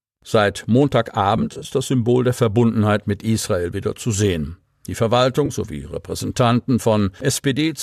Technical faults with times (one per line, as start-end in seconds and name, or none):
1.36-1.68 AAC frame loss with concealment
5.46-5.50 AAC frame loss with concealment